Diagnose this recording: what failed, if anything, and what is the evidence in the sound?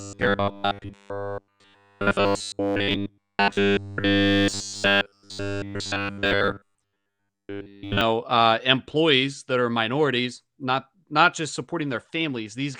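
From 0.01 to 8.01 s the speech is a rigid, metallic 100 Hz buzz, clearing just before "uh employees that are". This is robotic sound from repeated short buffers, likely a starved driver buffer looping a 10 ms chunk while nearly all real audio is skipped.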